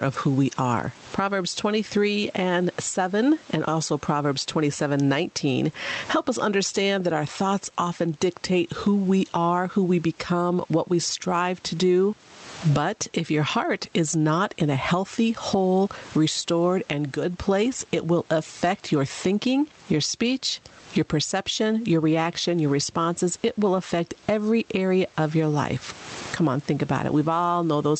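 Throughout the clip, the input gain is likely set far too high, with a fast limiter clamping it on each loud sound. The result is gain pumping, with the gain swinging by roughly 15 dB.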